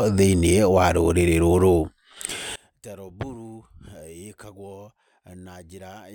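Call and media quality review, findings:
One channel inverted, 2.56 s to end of clip: speech collapses by about 24 dB on mono playback, leaving a faint residue. Likely cause: reversed polarity on one stereo leg in the mix or output stage, so common centre content cancels. Unlike a dropout, the sound never goes fully silent.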